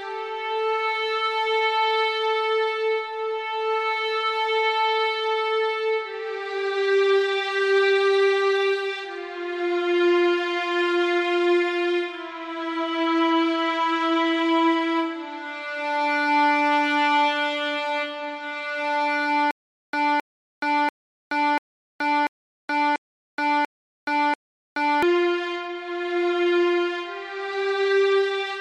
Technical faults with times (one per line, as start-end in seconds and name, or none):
19.51-25.03 stutter with silent gaps